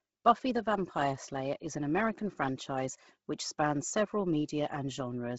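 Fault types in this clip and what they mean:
Bluetooth LC3 compression: The speech has a heavily degraded, breathy and grainy edge with nothing above 7.7 kHz, likely from LC3 coding at a low bitrate, fitting around 16 kbps. A spectrogram shows a hard ceiling there and patchy noise-filled upper blocks shifting about every 10 ms.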